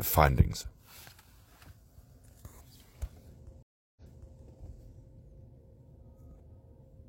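At 3.63 s the audio drops out in a stream reconnect: the connection broke, playback went silent for about 336 ms, and a new decoder picked up mid-stream. When sound returns, it resumes about 418 ms earlier than where it stopped, so a short stretch is heard twice. That points to the server resending a recent burst on reconnection. The disturbance spans 3.63 s to 4.38 s.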